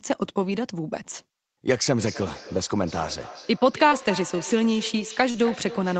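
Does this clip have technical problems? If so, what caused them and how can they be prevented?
Yes. The feedback echo between two devices starts at 1.98 s and runs to the end of the clip. Two devices in the same room joined one call, and one microphone picked up the other's loudspeaker. Each echo canceller removes only its own playback, so the sound loops back about every 0.3 s, at most about 14 dB below the speech. Room reverberation decays smoothly, but here the repeats arrive as distinct copies at a fixed spacing. Muting or leaving the call on one of the two devices, or using headphones, prevents it.

Short concealed packet loss occurs at 3.89 to 3.93 s, where 20 ms was filled in, and at 5.31 to 5.36 s, where 37 ms of a 40 ms hole was filled in. That audio missed the decoder's deadline, so the receiver extended the preceding sound, from its pitch or as shaped noise, and blended back into the real signal. 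It comes across as a brief smear rather than a silent dropout, because nothing goes quiet. A steadier connection, such as wired rather than congested Wi-Fi, prevents it.

A lost packet rebuilt from error correction follows each loss, at 3.91 to 3.93 s and 5.34 to 5.36 s, 20 ms each time. The next Opus packet carried a low-bitrate copy of the missing one, and the decoder played that copy, so the frames sound rougher and noisier but keep their real content. Concealment, by contrast, only guesses by extending the earlier sound. Reducing packet loss on the network prevents it, while keeping in-band error correction enabled keeps such losses this mild.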